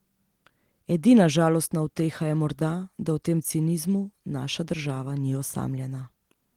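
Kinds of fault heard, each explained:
No faults are audible in this speech, and the Opus voice coding at about 20 kbps leaves only light codec damage.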